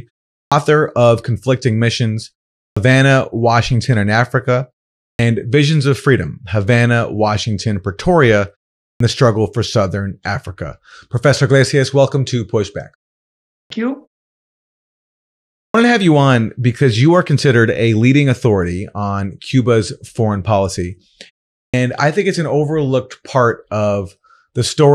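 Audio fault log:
0.42, 2.67, 5.08, 8.90, 13.59, 15.63 (before "to have you on") and 21.64 s (before "I think it's an"): clipped start after a pause. After each gap of 0.4 to 1.6 s, roughly 95 to 113 ms of onset is swallowed while the output device wakes or relocks, so speech bursts in abruptly without its first sounds. On a waveform, the envelope jumps straight from flat silence to full amplitude. A spectrogram shows a hard vertical edge with no leading consonant energy.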